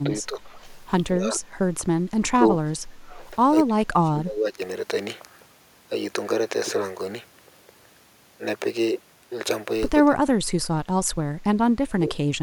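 Speech suppressed in double talk occurs seven times: 0.03 to 0.1 s, 0.26 to 0.52 s, 1.12 to 1.42 s, 2.34 to 3.09 s, 3.67 to 4.6 s, 10.05 to 10.4 s and 11.81 to 12.09 s. The talker's level sinks, by around 5 to 10 dB early on and as much as about 30 dB later. The likely cause is an echo canceller failing to separate its own talker from overlapping far-end loudspeaker echo and pulling down everything it picked up.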